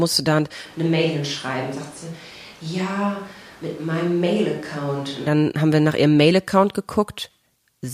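At 0.66 s the speech abruptly turns roomy and hollow, thinner in the bass and about 5 dB quieter, with room noise sitting roughly 25 dB below the speech. This is a switch to a distant microphone, likely because the close microphone's signal dropped out. It snaps back at 5.26 s. On the waveform the envelope steps down and the gaps between syllables fill in. The spectrogram shows weaker low frequencies and smeared reverberant tails.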